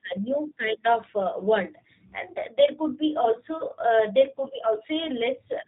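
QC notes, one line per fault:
Throughout: G.729 codec damage, plainly audible across the whole speech clip. The bandwidth stops near 4 kHz, so sibilants and upper consonant detail are missing and the sound is narrow and telephone-like. Each 10 ms frame is rebuilt from a vocal tract filter, a pitch predictor and a few fixed pulses, which gives the voiced sound a rough, slightly synthetic buzz. The character fits G.729A at 8 kbit/s.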